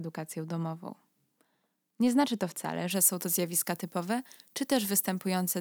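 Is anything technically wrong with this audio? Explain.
Yes. From about 2.91 s, right after "znaczy to wcale", to the end, there's pre-emphasis left on. The treble boost follows a 50 µs FM curve that was never undone, leaving 10 kHz about 11 dB hotter than 1 kHz, so the speech turns thin, bright and hissy on sibilants.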